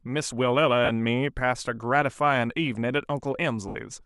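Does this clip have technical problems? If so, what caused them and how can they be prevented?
Yes, there are lost LE Audio frames in this speech: a short gap at 0.85 to 0.90 s, about 40 ms, and a longer one at 3.68 to 3.75 s, about 70 ms. The LC3 decoder patches each hole by repeating the last spectrum with scrambled phase, so you hear a brief noisy smear that fades as it goes. To prevent it, keep the Bluetooth link short and clear of interference, or allow a bit more buffering so late packets still arrive in time.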